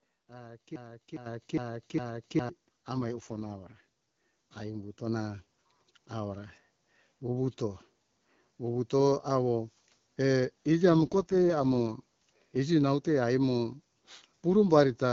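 Right at 0.76 s the sound catches in a broken-record loop: a chunk about 0.41 s long plays back to back, four times over, until 2.49 s. The most likely cause is a player, encoder or stream stalling and re-sending the last fragment it had buffered. Whatever should have been heard in those couple of seconds never arrives.

Inside that loop, at 1.26 s, there's a microphone volume step up of about 10 dB. Everything jumps louder at once, voice and background together, as if the call software decided the mic was too quiet and bumped the input level in a single move. A second, smaller step of about 4 dB lands at 5.07 s.

From 2.94 to 3.81 s you get an AMR rate drop. The codec falls from 12.65 to 6.6 kbit/s, presumably because a weak radio link pushed bits toward error protection. The bandwidth doesn't shrink and nothing goes silent, but the voice turns rougher and more synthetic. It happens again from 10.90 to 11.96 s, right before "iji naute aimo". 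Outside those stretches the AMR wideband (HD Voice) codec at 12.65 kbit/s leaves only light coding damage.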